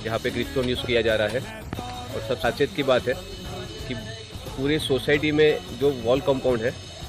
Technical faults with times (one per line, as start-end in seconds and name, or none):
0.84-0.87 loud pop
1.73-1.81 loud pop